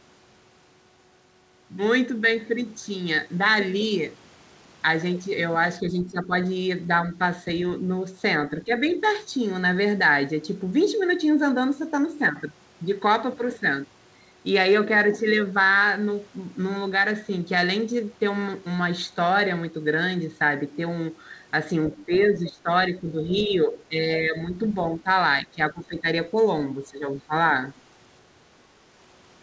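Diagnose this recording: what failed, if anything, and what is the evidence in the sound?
The speech dips by about 10 dB at 5.81–6.32, 21.96–25.07, 25.42–26.05 and 26.87–27.32 s, and by about 15 dB at 8.64–8.84 s. This is likely speech suppressed in double talk: the call's echo canceller turned down the near talker along with the far-end echo.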